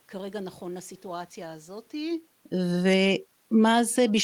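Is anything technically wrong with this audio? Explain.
Yes. From 2.72 s to the end, the automatic gain is falling. The gain control judged the input too loud, or its background too strong for its gain, and steadily reduced its gain, so the level sinks across the final stretch. What separates this from the talker moving back, as happens around 2 s, is that the room noise drops together with the voice. A change in microphone distance would weaken only the voice and leave the background where it was.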